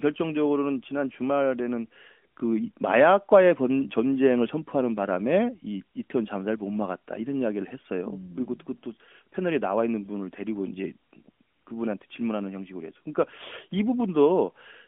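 No technical faults can be heard in this speech recording.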